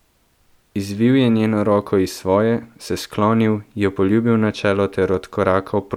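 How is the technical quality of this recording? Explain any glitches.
Nothing in this bit of speech jumps out as a technical problem, so there are no glitches to explain.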